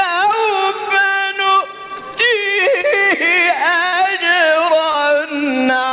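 At 2.81 to 2.89 s and again at 4.91 to 4.97 s, there is short concealed packet loss. About 30 ms of audio never reached the decoder in time, and the receiver bridged each gap by extending the preceding sound for under 30 ms before rejoining the real signal. Each spot is heard as a brief smear or wobble, with the lost fragment absent.

Between 3.87 and 3.95 s, a burst of packet loss removes about 60 ms in a row. The receiver prolonged the last sound while fading it down, producing a held buzz or dying hiss before the audio resumes with that stretch gone. All of this sits on a band-limited signal with nothing above 4 kHz, which fits a G.711 A-law call path.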